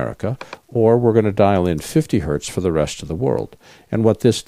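From the very start and all the way through, there's a grainy, gritty edge riding on the sound, and it gets rougher as the level drops. Quiet passages sound coarse and the faintest bits drop away or sputter rather than fading smoothly. That's likely low bit depth without dither: the samples were chopped down, which fits roughly 10-bit truncation, so the rounding error tracks the signal instead of sitting as steady hiss, landing somewhere around 50 dB below it.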